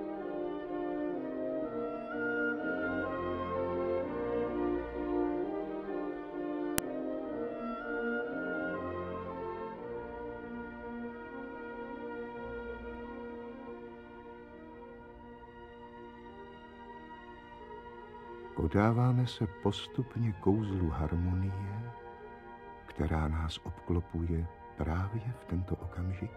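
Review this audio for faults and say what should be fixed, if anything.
There's a sharp, loud click at 6.78 s, and it's a file header played as audio. A joined segment kept its WAV header, so those header bytes went out as samples. Fix: strip headers from every piece except the first before concatenating or streaming.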